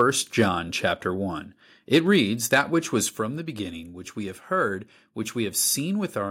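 A harsh, crackling edge lands on the loudest peaks at 0.00 to 0.02 s, 0.39 to 0.42 s, 1.94 to 2.16 s and 2.53 to 2.59 s, just before "which was from the". The tops run about 2 to 4 dB past the limit, likely microphone overload clipping them flat. The voice and background suddenly drop in level at 2.07 s, by about 3 dB, and again at 3.09 s, by about 5 dB, between "which was" and "from the beginning which". This is likely the microphone volume being stepped down after the distorted peaks.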